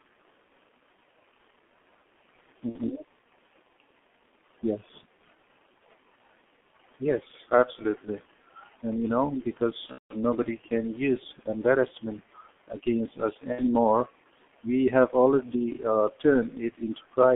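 Throughout, the speech carries G.723.1 codec damage: heavy low-bitrate coding around 6.3 kbit/s and a 200 Hz to 3.4 kHz telephone band leave it muffled, hoarse and smeared at consonants. VoIP packet loss concealed by the speech codec occurs at 2.70–2.78 s, 9.86–10.14 s and 13.52–13.61 s; the decoder stretches its last pitch and filter into a fading buzz or coloured noise, and in the middle gap, where loss runs up to 180 ms, it goes silent from the third lost frame.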